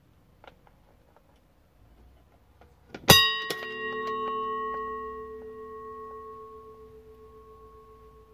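Listening through this recording of sounds, nothing stood out as a technical problem at any point.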